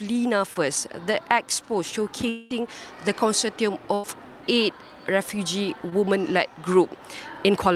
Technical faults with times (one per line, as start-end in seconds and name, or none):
0.53-0.57 short concealed packet loss
2.29-2.52 long network dropout
3.94-4.05 burst of packet loss
5.89-5.93 short concealed packet loss